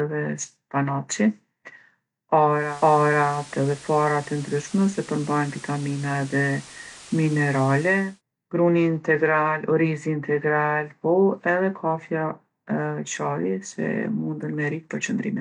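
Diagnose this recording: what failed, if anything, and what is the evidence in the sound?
The fault lies in the radio reception ahead of the recording. At 2.47 s the speech cross-fades over about 0.38 s to a hissier version of itself, and returns at 8.22 s. Between those points hiss sits roughly 20 dB below the signal, and the level shifts by about 1 dB. This is digital radio blending to analogue: the receiver lost the digital stream and faded to the same station's FM broadcast, then back.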